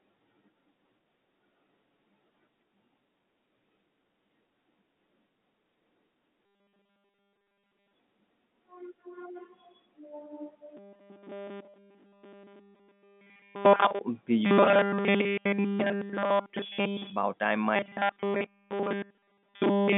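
A rigid, metallic 200 Hz buzz replaces the sound at 6.46–7.94 s, 10.77–14.01 s, 14.45–17.12 s and 17.76 s to the end. This is robotic sound from repeated short buffers, likely from all the audio being replaced by 5 ms buffers repeating over the narrow telephone-band G.711 line.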